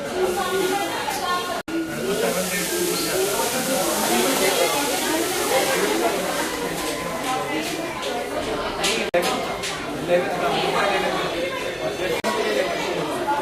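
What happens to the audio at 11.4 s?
Nothing goes wrong at 11.4 s; the sound carries on intact through that moment, with no dropout, click or distortion.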